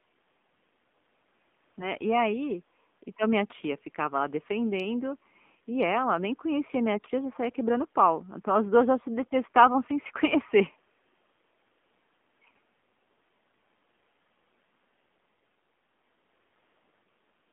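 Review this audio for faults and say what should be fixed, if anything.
The whole clip has gone through the AMR narrowband mobile codec. The band stops around 200 Hz to 3.5 kHz, and the speech sounds buzzy and synthetic, with plainly audible codec damage. That fits a low mode of about 7.4 kbps, where there are few pulses to drive the vocal-tract model. If you can, capture or route the call over a wideband path, or at least a higher AMR mode.

There are also AMR bit errors at 1.78–1.91 s and 6.94–7.11 s. For those moments the speech turns hoarse and gargly, though pitch and level hold. Flipped low-priority bits misplace the excitation pulses and skew the finer gain and spectrum values, which fits an error rate of a few percent. A stronger radio link, or a setup that drops bad frames instead of decoding them, would prevent this.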